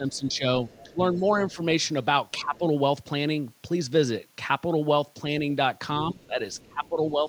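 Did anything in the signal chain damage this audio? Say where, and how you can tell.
Yes. In call processing, the echo canceller likely mistook double talk for echo and turned the near-end speech down with it. The speech dips by roughly 10 to 15 dB at 0 to 0.45 s, 0.84 to 1.58 s, 2.36 to 2.63 s and from 6.12 s to the end.

The same echo canceller also left residual echo: the other side's voice, played on the local loudspeaker, is likely not fully subtracted from the microphone. A faint second voice, some 25 to 30 dB under the speech, leaks through at 0.72 to 0.85 s, 1.18 to 1.3 s and 6.11 to 6.89 s.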